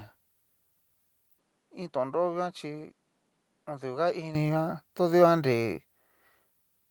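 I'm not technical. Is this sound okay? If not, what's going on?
No. From 1.38 s to 4.35 s the speech turns duller and noticeably quieter, with a faint new hiss underneath, then clears up again. The likely cause is an input switched to a poorer device, one that loses the crisp upper sounds.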